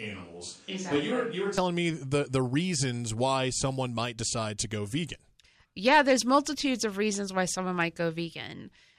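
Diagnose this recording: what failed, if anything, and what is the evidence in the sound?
The speech is already roomy and hollow when the clip starts and stays that way until 1.58 s, when it steps abruptly to a closer, fuller sound just before "me the the reasons". It is about 5 dB quieter during this stretch, with background noise around 35 dB below the speech. This points to a capture-stage switch to a distant microphone, likely because the close microphone's feed was missing. A spectrogram would show thinner lows, reverberant tails smearing onsets and a raised noise floor. The waveform envelope is smaller until the sudden step at 1.58 s.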